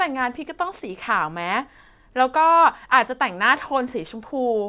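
No technical faults can be heard anywhere in this speech recording. There is nothing in the audio that calls for a timestamp or an explanation.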